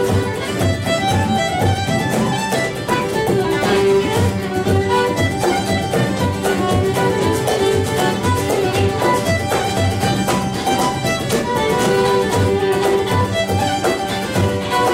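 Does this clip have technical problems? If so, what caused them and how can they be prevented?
No, nothing here points to a technical fault, so there is no cause to trace and nothing to prevent.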